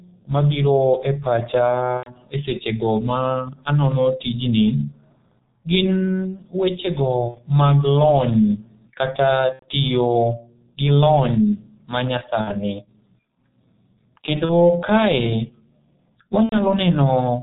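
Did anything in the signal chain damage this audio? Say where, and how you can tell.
Yes. At the codec stage, G.723.1 coding at 6.3 kbit/s removes everything above 4 kHz and tracks the voice slowly, leaving the speech heavily muffled, hoarse and consonant-smeared throughout.

On the network, VoIP packet loss concealed by the speech codec shows where the decoder extrapolated missing frames: buzzy or noisy, fading smears at 1.97–2.11 s (between "mabiro e pacha" and "e sechego ma anono"), 7.28–7.40 s, 9.53–9.65 s, 12.41–12.63 s, 14.45–14.53 s and 16.43–16.61 s, with weakened speech lingering afterward.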